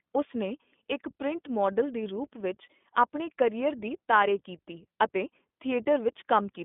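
Throughout, the speech carries iLBC codec damage. It is band-limited to roughly 200 Hz to 3.5 kHz, with nothing above 3.7 kHz. Each short frame is coded on its own, which fits 20 ms frames. The result is plainly rough and synthetic.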